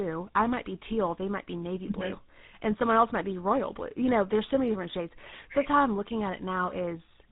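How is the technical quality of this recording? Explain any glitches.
The quality is poor: the speech shows tandem speech coding throughout. It was likely CVSD and then GSM full rate, each re-encoding decoded audio, leaving rough, muffled, warbly speech with nothing above 3.8 kHz on a spectrogram.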